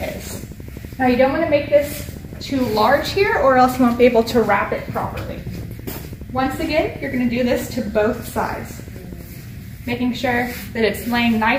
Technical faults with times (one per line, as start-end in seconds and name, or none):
0.02-9.22 train of clicks